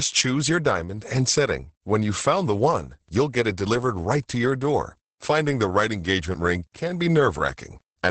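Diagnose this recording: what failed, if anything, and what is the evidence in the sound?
The failure is at the codec stage: Opus voice compression runs through the whole speech clip. Nothing survives above about 8.8 kHz, and the voice sounds muffled, hoarse and faintly robotic. That points to the SILK linear-prediction mode at a low bitrate, around 10 kbps, where the excitation is coded coarsely. A plain low-pass or resampling fault would only dull the top end. The grainy, synthetic texture in the voice itself is what marks heavy codec damage.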